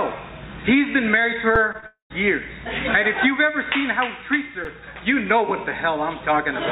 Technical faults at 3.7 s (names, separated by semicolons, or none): none